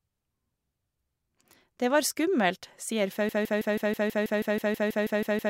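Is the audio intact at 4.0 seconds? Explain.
No. From 3.29 s to the end, a broken-record loop repeats a 0.16 s fragment 14 times back to back, likely a stalled player resending its last buffer.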